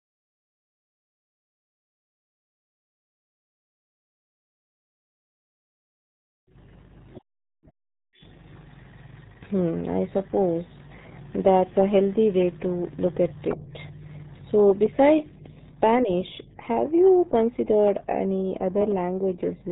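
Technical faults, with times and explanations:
Throughout, RealAudio 14.4 codec: the speech comes through with heavy codec damage, muffled and gargly, and the top end simply stops at about 3.8 kHz, so there's no air or sibilance left. That's the old RealAudio 1 speech coder at work. The thinness and warbly smearing fit a tiny budget of around 8 kbit/s, built for dial-up modems, where most of the detail gets thrown away.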